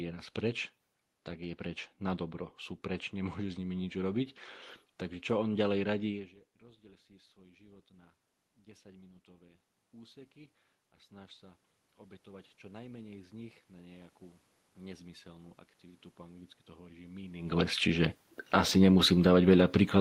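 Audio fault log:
6.10–11.69 s, 12.24–14.18 s, 14.77–18.12 s: automatic gain rising. After the sound drops about 24 dB at the microphone near 6 s, the gain control slowly adds about 6 dB, then about 4 dB and about 5 dB, so voice and room noise swell together.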